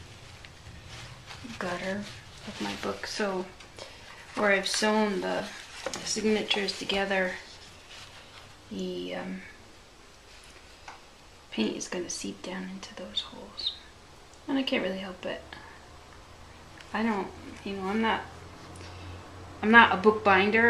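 From 5.38 to 5.40 s there are lost LE Audio frames: about 20 ms of audio is missing, which fits two 10 ms LC3 frames. The decoder fills the gap by repeating the last spectrum with randomised signs, so the sound briefly turns into a short, noisy smear.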